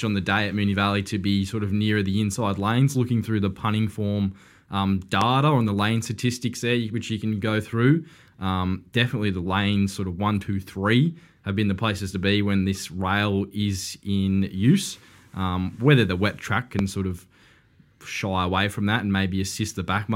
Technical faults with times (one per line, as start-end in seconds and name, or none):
5.21-5.25 loud pop
16.79-16.83 loud pop